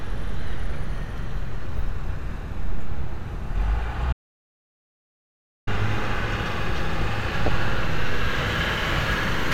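DAB burbling at 1.15 s: bit errors at a very low rate got past the error correction, so short blips of noise landed in single sub-bands and left a few watery blips. Audio dropout to silence from 4.13 to 5.67 s: the sound cuts to silence with no room tone for about 1.5 s, likely from the input link failing while silence was recorded. DAB burbling returns from 7.46 to 7.48 s as a few watery blips from corrupted sub-band data.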